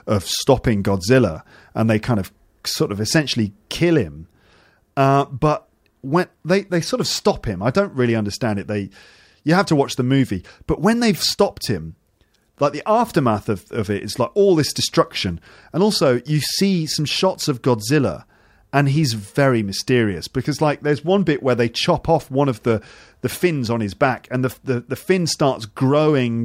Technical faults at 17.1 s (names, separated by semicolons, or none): none